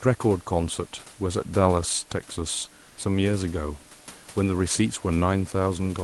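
From 2.87 to 2.97 s, comfort noise replaces the room background: a steady, featureless noise at unchanged level, likely from discontinuous transmission briefly pausing the sender.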